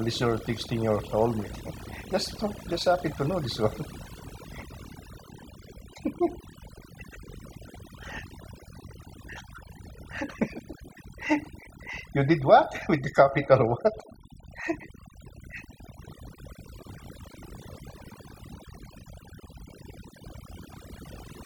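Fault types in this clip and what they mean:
Overdone noise removal: A noise reducer set too hard drops individual frequency bands that sit near its noise estimate, taking quiet parts of the speech with them. Throughout, pauses fall to near silence with twinkling specks, unlike steady dull muffling.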